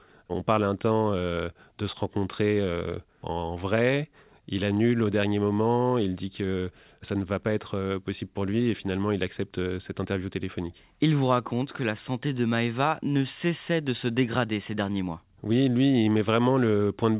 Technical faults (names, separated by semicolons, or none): none